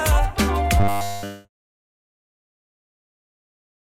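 From 0.8 to 2.19 s the sound turns to a rigid 100 Hz buzz, the robotic sound from repeated short buffers, likely from 10 ms blocks repeating nearly continuously. Its fixed pitch distinguishes it from a codec's watery smearing, and it persists through the smooth fade-out that begins around 1.0 s.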